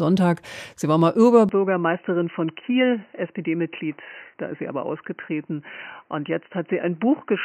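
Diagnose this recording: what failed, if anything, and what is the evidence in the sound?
Input switched to a poorer device at 1.49 s, right after "war mal", to the end. With no gap, the speech loses everything above 3 kHz, drops about 5 dB and gains new noise roughly 40 dB down. The driver likely moved capture to a narrower-band microphone.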